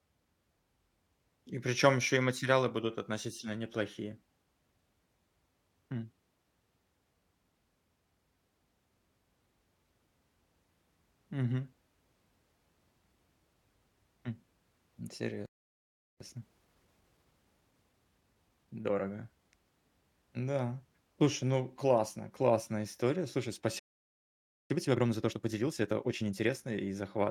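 At 15.46 s the speech cuts out for about 0.74 s, until 16.20 s. This playback stall is most likely the player running short of data or its output thread being held up, which leaves a gap in mid-flow. From 16.20 s to 19.20 s a time-compressed catch-up follows. The player trims its backlog by removing short slices and cross-fading across the joins, so the speech runs about 1.1 times fast at unchanged pitch.

A second playback stall starts at 23.79 s and silences the output for about 0.91 s, until 24.70 s. It is likely the same kind of starvation or blocked thread. The catch-up after it is more aggressive. From 24.70 s to 26.50 s the speech is compressed to about 1.5 times normal speed. It sounds clearly hurried, though the pitch still holds.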